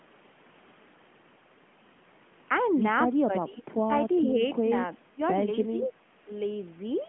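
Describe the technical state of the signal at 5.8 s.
At 5.8 s the speech sits inside a brief dip from 5.74 to 5.89 s, likely speech suppressed in double talk: with both sides active, the echo canceller could not tell the local talker from loudspeaker echo and pulled the level down. The loss is shallow, about 5 dB at its deepest, heard as a short sag in loudness. On a waveform the envelope narrows for about 150 ms; a spectrogram shows the band, which stops near 3.6 kHz, fading slightly across that stretch.

Overlapping its end, from 5.83 to 5.9 s, comes an echo leak: a faint copy of the voice arriving 393 ms late, likely returned from a loudspeaker whose echo canceller left some of what its microphone picked up. It sits about 25 dB below the speech, a brief scrap behind the talker. A spectrogram would show weak harmonic traces offset in time beneath the main voice; on the waveform it is barely visible.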